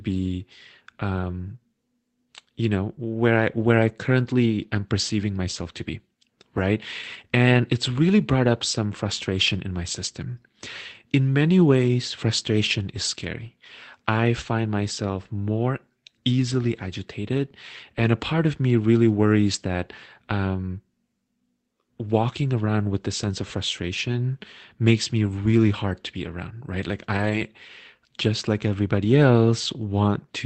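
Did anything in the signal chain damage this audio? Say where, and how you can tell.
Yes. Network packet loss, rebuilt from error correction at 1.15–1.25 s, 27.13–27.43 s and 29.63 s: low-bitrate backup copies filled each gap, so the audio continues but sounds rougher and noisier there.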